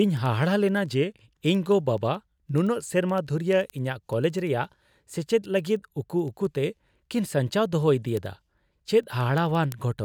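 Word clock ticks run from 0.17 s to 9.98 s: sharp clicks of uneven strength, about ten per second. The receiving device's clock isn't locked to the sender's, so each slip drops or repeats a sample. The rate fits a clock error of a few hundred ppm.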